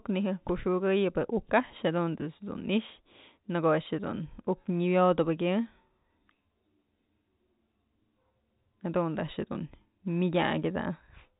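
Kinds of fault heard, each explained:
No fault can be heard in this speech, which comes through a telephone-band G.711 path that passes nothing above about 3.8 kHz and leaves at most a faint low-level coding hiss riding on the speech.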